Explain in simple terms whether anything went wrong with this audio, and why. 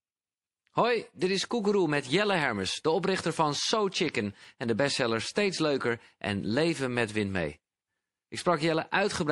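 Yes, a few things went wrong. The whole speech clip has a watery, swirly quality, with hissy s sounds turning a bit metallic and chirpy. That's most likely MP3 compression squeezed too hard: the encoder ran short of space, so it chopped off the top of the treble and kept dropping faint details in and out from one instant to the next. The damage is plainly audible all the way through.

Between 4.08 and 4.57 s, just before "en de bestseller", you get five quick ticks, the longest around a millisecond. These are CD scratch ticks. A mark on the disc wiped out more data than the player could repair, once per spin, so it papered over the gap by guessing or briefly muting. The ticks come at a steady rate and are gone within half a second.

Right after "en de bestseller", at 5.34 s, there's a short hiss just ahead of a sharp onset, and the onset itself sounds a bit blunted. That's pre-echo. The encoder handles sound in chunks of about 48 ms and spreads its noise evenly across each one, so the loud moment's noise leaks into the quiet just before it, here over about 17 ms. 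It never switched to shorter chunks, which would have kept the noise contained.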